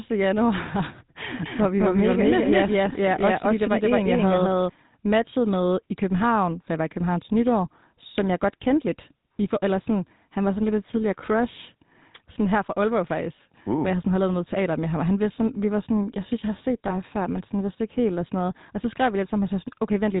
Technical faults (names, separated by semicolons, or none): GSM full-rate codec; doubled audio track; lost GSM frames